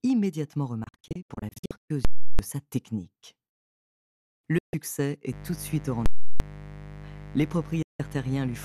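From 0.84 to 1.90 s the speech breaks up in a digital broadcast dropout. The receiver mutes whenever frames fail, leaving scattered holes totalling about 0.55 s, the longest about 120 ms. Each cut has a 3 ms fade and the speech returns having moved on. That makes it a lost signal rather than a pause or a clipped peak.

At 2.05 s a loud pop marks invalid numbers at full scale. The output is pinned at maximum for 341 ms, which fits a 16384-sample block, and a second pop comes at 2.39 s with dead silence between. Unlike a dropout's fade to quiet, the block is slammed to the limit.

Short dropouts follow at 4.58 to 4.74 s and 7.82 to 8.00 s, each briefly muting the speech.

From 5.32 s to the end, mains buzz sits about 15 dB below the speech. Switching spikes on the 50 Hz supply add harmonics up to several kHz, so it sounds raspy rather than like a smooth hum.

At 6.06 s the full-scale block recurs, again with pops at 6.06 and 6.40 s.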